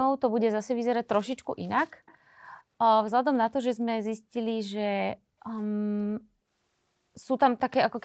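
At 1.25 to 1.30 s and again at 2.06 to 2.18 s, a faint delayed copy of the speech appears behind the direct sound. It trails by about 218 ms and sits very low, roughly 30 dB under the speech. It is brief and scrappy. The likely cause is an echo leak. The far side's echo canceller let part of its loudspeaker pickup through, and that residue came back down the line.

From 6.03 to 6.17 s the room background dips sharply, by about 19 dB at its deepest, then recovers. The hole lasts about 150 ms. This is background gated by the echo canceller. While the loudspeaker was active, the canceller pulled the microphone down hard, so the ambient sound briefly vanished. The surrounding audio carries the call path's normal band limit, with nothing above 8 kHz.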